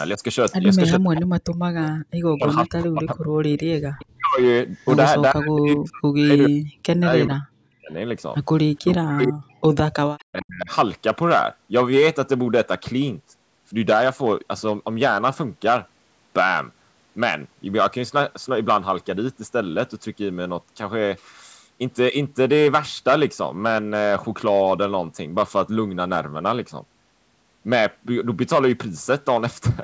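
Hard clipping runs through the whole speech clip. The level was pushed about 8 dB past what some stage could pass, so the peaks get sliced flat. Only a small share of the signal hits the ceiling, but the peaks pick up a gritty crackle. Those squared-off tops spray extra harmonics upward, and with the call band topping out at 8 kHz that grit sits right in the brightest part of what's left.

From 0.99 to 4.39 s, and again from 5.32 to 7.91 s and 8.83 to 10.69 s, the talker keeps dipping and breaking up. That's speech suppressed in double talk, likely because the echo canceller couldn't separate this voice from the far end's loudspeaker sound while both were going and ducked everything. The drops get as deep as around 40 dB, and each stretch loses a second or two of voice in chunks.

Echo leak shows up alongside these, at 1.82 to 1.91 s, 3.51 to 4.03 s, 4.74 to 4.86 s and 10.19 to 10.24 s. 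You hear a faint ghost of the voice trailing about 0.41 to 0.43 s behind, well down in level, about 20 dB under at most and as low as roughly 35 dB under. The likely story is a speakerphone on one side whose canceller let some of its own pickup slip back into the call.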